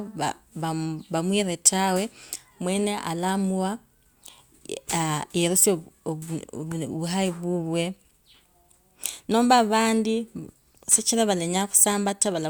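No dropouts, clicks, distortion or other technical faults are present anywhere in the recording.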